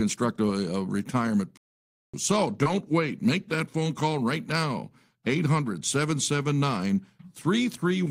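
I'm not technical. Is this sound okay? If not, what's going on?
No. At 1.57 s, right after "a retirement", there's a playback stall: the player likely ran out of data, so the speech goes silent for about half a second until 2.14 s.

From 2.63 to 2.68 s there's a short concealed packet loss: about 20 ms of audio arrived too late, and the receiver patched the gap by extending the preceding sound, leaving a tiny glitch.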